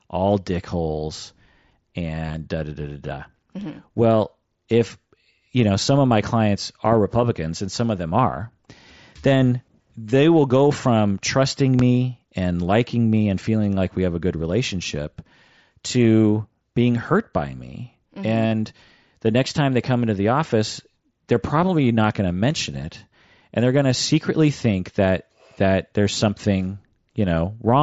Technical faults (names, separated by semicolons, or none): concealed Bluetooth headset packet loss; loud pop